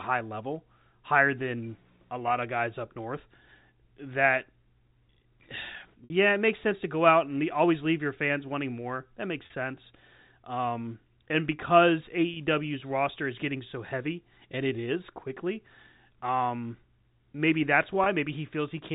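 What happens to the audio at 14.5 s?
Nothing goes wrong at 14.5 s; the speech carries on intact through that moment, with only the narrow telephone band and faint level-following hiss of the G.711 telephone coding that runs throughout.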